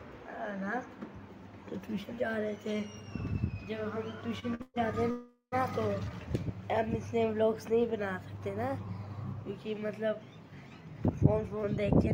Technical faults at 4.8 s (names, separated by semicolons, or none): call audio freeze